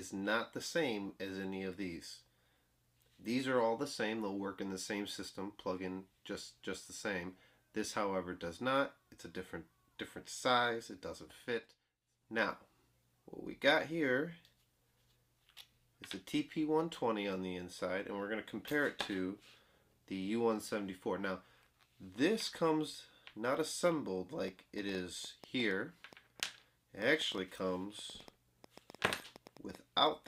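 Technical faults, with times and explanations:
24.48–30.27 s, train of clicks: uneven ticking at about 5.7 per second, peaking roughly 5 dB above the sound, likely from interference or a faulty connection or power supply.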